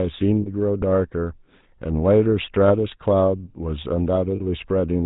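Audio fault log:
Throughout: GSM full-rate codec. Buzzy, gravelly roughness with nothing above 4 kHz, plainly audible, from a 13 kbps coder rebuilding the voice from sparse pulse excitation.
0.42 s, 2.68 s, 4.36 s: lost GSM frames. Brief rough, metallic ring, about 40, 20 and 40 ms, as missing frames were filled by repeating the last good one.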